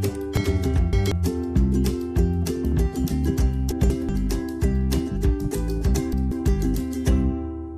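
Chunks out of order affect the audio three times: 0.37–1.12 s, where a block lands three chunks late, then 3.72–4.09 s and 5.94–6.32 s, each one chunk late. The chunks are about 186 ms long. Each spot sounds like a brief jumbled moment. On a waveform or spectrogram it shows as vertical discontinuities at the chunk boundaries, with a displaced segment that breaks the surrounding pattern.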